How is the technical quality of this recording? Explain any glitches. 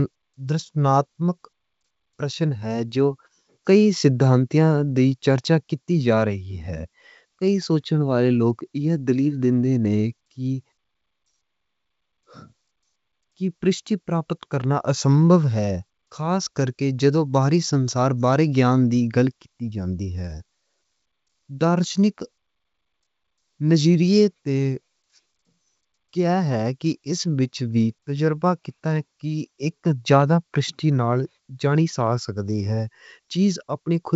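The technical quality is good, with no glitches to explain: the speech comes through G.722 wideband telephone coding at 64 kbit/s, with nothing above 7.7 kHz.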